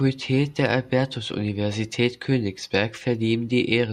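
Speech recording; no technical faults can be heard anywhere.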